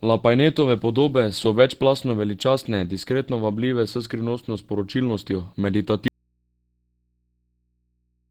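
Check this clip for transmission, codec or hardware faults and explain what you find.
Two faults turn up here. Throughout, the speech sounds hoarse and muffled, likely from Opus compression in its hybrid speech mode, at a bitrate of around 16 kbps. From 6.08 s to the end there's an audio dropout to a faint residue: the speech cuts off abruptly, leaving only mains hum far below the speech level, likely from the signal being lost while the input stayed live.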